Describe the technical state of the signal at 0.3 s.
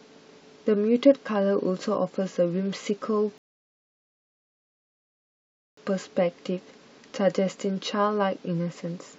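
At 0.3 s the audio is intact, with no fault present at that moment.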